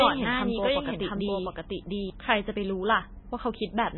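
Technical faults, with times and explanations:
Throughout: MP3 compression. The speech sounds watery and swirly, with smeared consonant attacks and nothing above 4.1 kHz. The likely cause is heavy MP3 encoding at a very low bitrate, around 16 kbps, which cuts the treble and drops weak frequency lines unevenly between frames.
0.0 to 2.1 s: doubled audio track. Already under way when the clip opens, a second full-band copy of the speech trails the original by roughly seven tenths of a second at about the same loudness, with no decay or room colour. It stops abruptly at 2.1 s. The likely cause is the same audio being mixed in twice, with one copy out of step.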